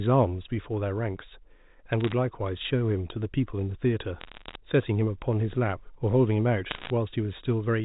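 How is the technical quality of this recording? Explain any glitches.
Three short bursts of bit errors on a digital phone line damage the speech, carried over what sounds like G.711 mu-law telephone coding with nothing above 4 kHz.

The bursts run from 2.01 to 2.12 s, from 4.19 to 4.56 s and from 6.70 to 6.90 s. In each one, the digital line flipped individual bits, at a rate of around 0.4 percent in the first burst, around half a percent in the second and around one percent in the last. Every flipped bit corrupts a single 8-bit logarithmic sample. When the error lands on a high-order bit, or on the sign bit of a loud sample, that sample jumps far from its true value and produces a sharp tick. Packed together, these ticks sound like crackle sitting over speech that is otherwise unchanged beneath it. The final burst is the densest.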